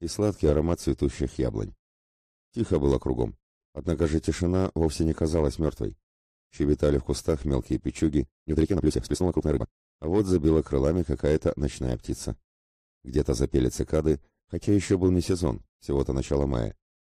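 From 8.22 s to 9.84 s the audio suddenly rushes along at twice its normal pace while the pitch stays put. This is a time-stretched section, likely from software squeezing that span by dropping short slices to shorten it.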